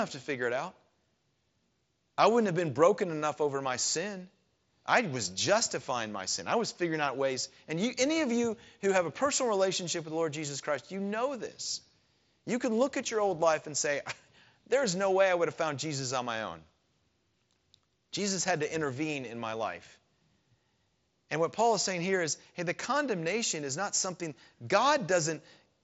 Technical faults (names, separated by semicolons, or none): none